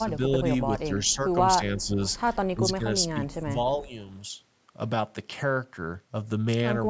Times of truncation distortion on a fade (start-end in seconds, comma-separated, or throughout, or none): none